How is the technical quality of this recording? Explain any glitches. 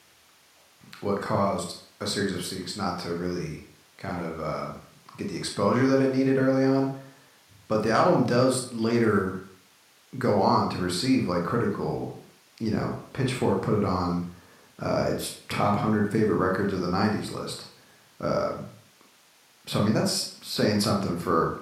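No glitches here at all; nothing jumps out as a technical fault anywhere in this speech recording.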